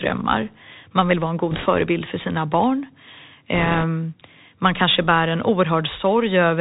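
Bluetooth CVSD headset codec runs through the whole of this speech clip, and the damage is plainly audible. The sound is squeezed into a narrowband channel with nothing above 4 kHz, because the codec sends only a one-bit up-or-down decision per sample and adapts its step size, which fits a 64 kbps link. Loud high-frequency energy outruns that step, so s sounds come out scratchy and distorted over a constant granular hiss.

Bit errors on a Bluetooth voice link hit the audio twice, from 1.51 to 1.66 s, right after "man vill vara en" and before "för sina barn", and again from 3.55 to 3.84 s. In both places a rushing, crackly noise rides over the speech. Because every CVSD bit carries the same small weight and the step adaptation lets each error fade quickly, an error rate of a few percent produces this diffuse grit rather than sharp clicks.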